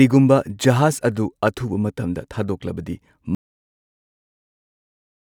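At 3.35 s the speech stops abruptly and an audio dropout to silence runs to the end, about 2.0 s of nothing. The input was likely lost, through a disconnected device, a failed link or an accidental mute, while recording carried on writing silence. Unlike a fade-out or a noise gate closing, there is no taper and no room tone or hiss beneath it. The silence is dead flat, and whatever followed is gone.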